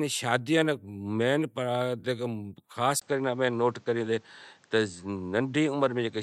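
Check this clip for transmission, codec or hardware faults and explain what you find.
One fault, from 3.0 s to the end: the input most likely switched to a poorer device. The new path cuts everything above 8.4 kHz, so the speech turns duller after a 20 ms gap, with a fresh noise floor far beneath it and no real change in level.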